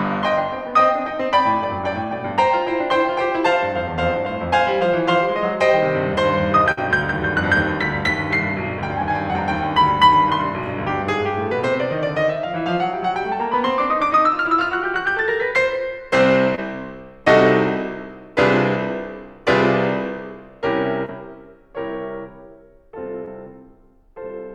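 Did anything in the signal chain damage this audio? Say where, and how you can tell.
Yes, the network leg did, with packets dropped on the way to the decoder. The clearest case is a burst of packet loss from 6.71 to 6.79 s. The receiver ran about 56 ms of made-up continuation, stretching the last bit of music and fading it down before picking up again. Roughly 60 ms of real material is simply gone, so the music jumps slightly forward there.

Then there are three shorter spots of short concealed packet loss, at 16.55–16.59 s, 21.05–21.11 s and 23.25–23.29 s. Each is about 20 ms missing, patched with 19 to 27 ms of concealment extrapolated from what came just before, then crossfaded back into the real signal. You hear a quick smear or wobble rather than a gap. At 21.05 s a further 11 ms or so got dropped during the catch-up.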